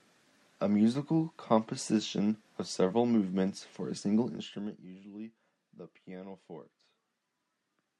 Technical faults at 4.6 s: zipper noise

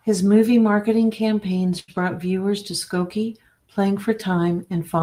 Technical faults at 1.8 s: short stall from a late packet

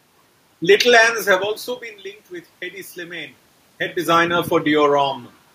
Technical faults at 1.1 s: none

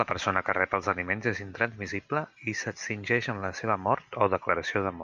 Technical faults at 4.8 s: none

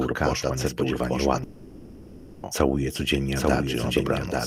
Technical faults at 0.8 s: doubled audio track

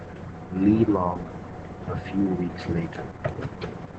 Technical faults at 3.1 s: Opus voice compression

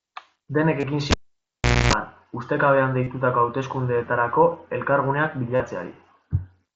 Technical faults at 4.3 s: none

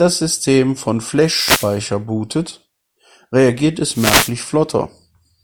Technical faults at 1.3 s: wireless microphone noise hit

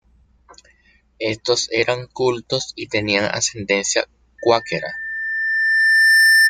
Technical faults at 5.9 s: loudspeaker feedback squeal

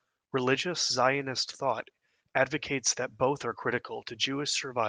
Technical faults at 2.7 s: none

